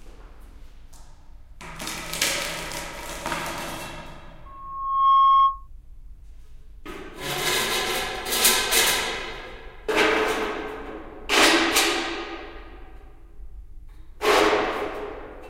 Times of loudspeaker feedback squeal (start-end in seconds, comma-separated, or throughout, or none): 4.45-5.68